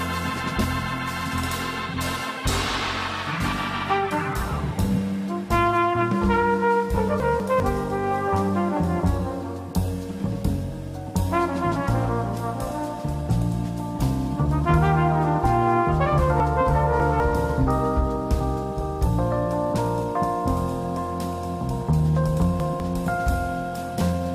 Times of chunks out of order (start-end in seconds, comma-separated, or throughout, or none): 7.20-7.60, 16.40-17.20, 22.40-22.80